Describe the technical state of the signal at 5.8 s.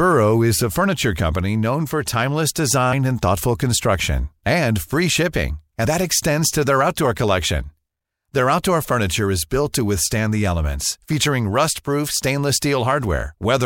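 At 5.84 s the speech briefly smears and lurches forward, a soft blurred blip rather than a sharp click. This is compressed frames skipped: around 50 ms of audio never plays, which fits about two lost frames of 26.1 ms each. The overlap between neighbouring frames softens the join.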